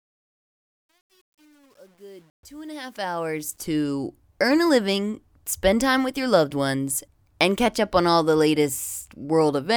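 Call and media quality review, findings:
Gritty fade-in 0.0–3.65 s, worst 0.0–3.03 s, at the quiet start. Truncation distortion on the fade: gain stage kept only 9 bits, undithered, so low-level waveform collapses into coarse square steps.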